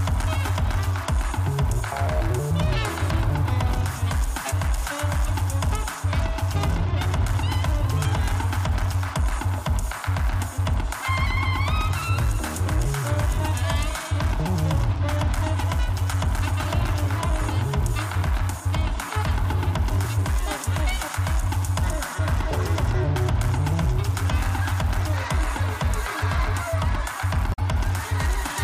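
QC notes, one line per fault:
27.50–27.59 s, damaged data in a compressed stream: a short run of the compressed data was corrupted, so the decoder misread those frames, lost sync and searched for the next valid frame header, producing a brief squawk or blip lasting about 90 ms.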